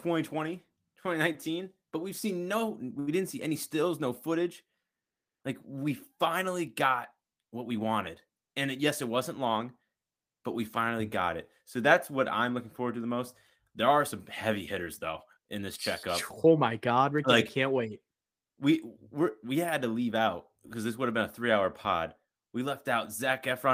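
A short stall from a late packet occurs at 2.99 to 3.10 s, right after "we've seen no we" and before "didn't see any stills". A packet did not arrive on time and the jitter buffer ran dry, so the receiver stretched the last stretch of speech for 77 ms until the packet turned up. Playback then resumed from the same point, so no speech is lost. The held sound drags slightly, and everything after it runs 77 ms later.

A jitter buffer speed-up follows at 16.44 to 17.30 s, between "though in this checkup" and "like I can't wait". The buffer had built up more audio than its target. To shed the extra delay, the receiver cut many tiny pitch-period-sized slices in a row, removing roughly 70 ms in total. Over that stretch the speech runs at 108% speed with its pitch unchanged, so the phrase sounds slightly rushed.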